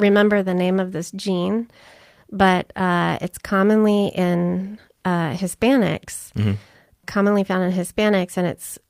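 No technical faults occur at any point in the speech, so there is nothing to describe in time order.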